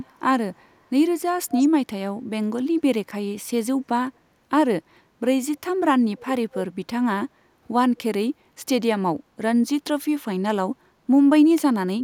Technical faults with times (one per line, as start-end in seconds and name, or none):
0.00-0.18 echo leak
0.63-0.67 echo leak
1.51-1.68 echo leak
6.15-6.26 echo leak
6.51-6.56 echo leak
7.97-8.02 echo leak